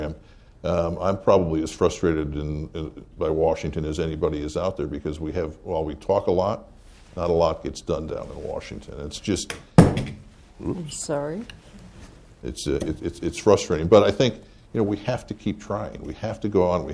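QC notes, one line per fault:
No faults found in this clip. Nothing to log.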